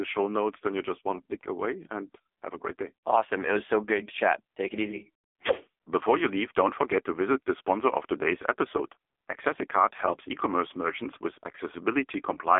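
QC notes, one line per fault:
Throughout: AMR narrowband mobile codec, speech buzzy and synthetic, nothing above 3.7 kHz; heavy damage fits AMR-NB around 6.7 kbps squeezing voice into a 300 to 3500 Hz line band.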